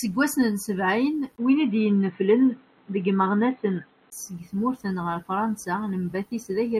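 A speech clip in which, from 1.36 s to 4.12 s, the sound turns dull and boxy, with nothing above 4.1 kHz, a level shift of roughly 5 dB and a faint new background hiss well below the speech. A 20 ms gap marks the switch at 1.36 s, and the full bandwidth returns at 4.12 s. The likely cause is an input switched to a poorer device, such as a narrowband headset profile, with its own response, gain and noise floor.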